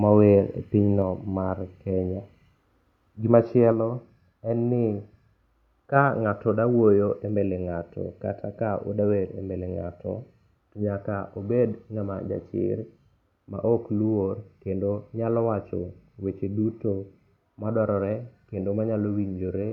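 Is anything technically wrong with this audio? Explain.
Yes. At 3.72 s there is a microphone volume step-down: the calling software has likely judged the input too hot and lowered the microphone's input volume in a single jump rather than easing it down. In the audio, the speech and the background behind it both drop by about 3 dB at once, and they stay at that lower level afterwards instead of recovering. The result is an abrupt, audible step in loudness.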